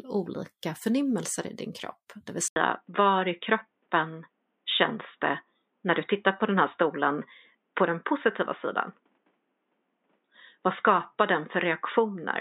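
At 2.48 s the speech cuts out for 80 ms, then returns dull and boxy, with nothing above 3.8 kHz, a few dB off in level and over a faint new hiss. That's likely the input switched to a poorer device, lasting to the end.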